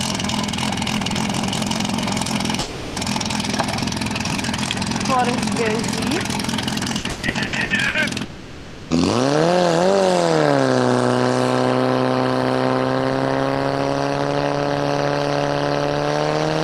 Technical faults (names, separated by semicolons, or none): long network dropout; repeated packet loss (robotic sound)